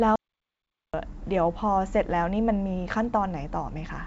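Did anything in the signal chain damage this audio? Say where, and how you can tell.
Yes, there's an audio dropout to silence from 0.16 to 0.94 s: pure silence with no room tone, most likely the input link or device briefly disconnecting upstream of the recorder.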